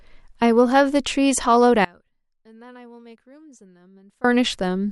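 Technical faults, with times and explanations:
1.85 to 4.24 s, audio dropout to a faint residue: the speech cuts out abruptly and stays gone for about 2.4 s, then returns just as suddenly. The gap is not silent. A faint sound remains, roughly 25 dB below the speech. That abrupt change is why this sounds like a broken feed rather than a pause or fade. The likely cause is a loss of the wanted signal upstream while the path after the break stayed live.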